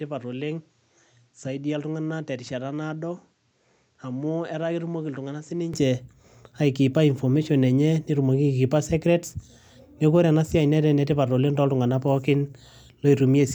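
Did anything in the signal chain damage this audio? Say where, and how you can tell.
Yes. From the start to 5.74 s the capture stage was likely running on a poorer input device, which switched to a better one at 5.74 s with no gap. For that opening stretch the speech has nothing above 8.2 kHz, so it sounds dull and boxy, sits roughly 10 dB quieter, and carries a faint background noise around 40 dB below the speech. After 5.74 s the top end and level return at once.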